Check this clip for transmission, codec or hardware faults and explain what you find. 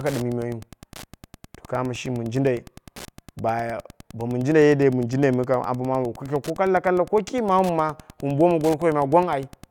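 One hardware fault is present throughout the speech: Wi-Fi interference. A steady tick about ten times a second sits roughly 25 dB under the speech. It is a nearby radio's 102.4 ms beacon, rectified by the audio circuit.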